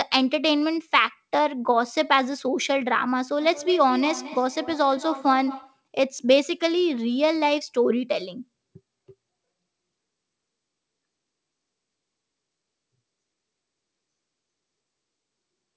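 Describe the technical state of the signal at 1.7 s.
At 1.7 s the speech is intact, with no dropout, glitch or distortion, only the even band-limiting of the call path with nothing above 8 kHz.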